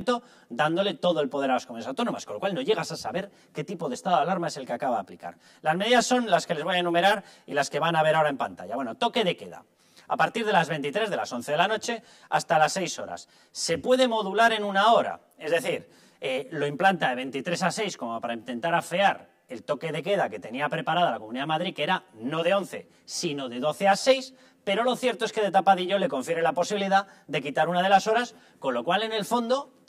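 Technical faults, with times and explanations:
throughout, channel delay (comb filtering): one channel arrives roughly 10 ms late, and summing both to mono cancels shared content at evenly spaced frequencies from around 40 Hz upward. The sound turns hollow and phasey. A spectrogram shows fixed horizontal notch stripes across time.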